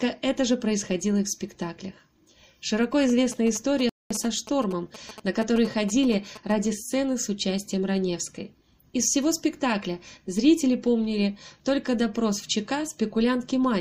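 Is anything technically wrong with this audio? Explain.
Yes, two things. From 3.09 to 6.52 s there are GSM signalling bursts: a nearby 2G phone is handshaking with the network, and the audio circuitry rectifies its radio pulses into a galloping run of short buzzes at 217 Hz, sitting roughly 15 dB under the sound.

Inside that stretch, at 3.89 s, there's a rebuffering stall. The player ran dry of downloaded data and paused, so the audio drops to silence for about 0.21 s, then picks up exactly where it stopped. Nothing's missing, but the timing gets stretched.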